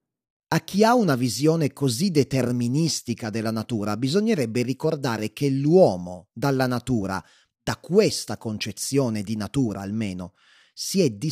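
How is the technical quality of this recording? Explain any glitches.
Nothing in the recording stood out as a technical problem on listening.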